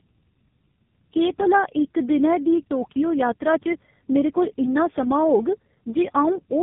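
From start to finish the speech carries tandem speech coding: roughly three low-rate codecs stacked, each re-coding the last one's damage, so it's rough, warbly and muffled, with nothing above 3.6 kHz.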